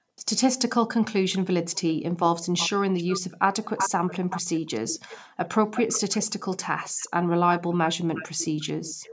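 From 0.03 to 0.14 s the speech drops out almost completely. This is speech suppressed in double talk, likely from an echo canceller ducking both sides while they overlap. At 0.16 to 0.22 s, a faint echo leak follows, 446 ms behind and far below the speech, likely residual loudspeaker pickup. From 1.32 s to the end, a stronger echo trails the speech by 365 ms, likely the same leak. Between 3.61 and 7.29 s, the speech cuts out in pieces, likely double-talk suppression again. A final short dropout comes at 8.78 s.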